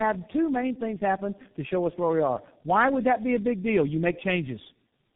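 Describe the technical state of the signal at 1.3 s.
At 1.3 s there's tandem speech coding running through the whole clip: the speech sounds re-encoded about three times, likely ending at G.723.1, so it's rough, muffled and warbly, with nothing above 3.8 kHz.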